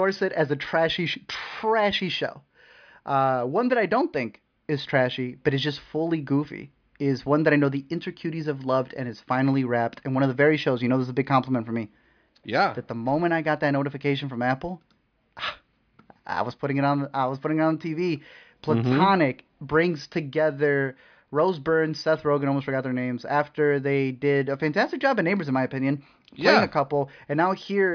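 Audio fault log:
No faults detected in the speech recording; nothing to log.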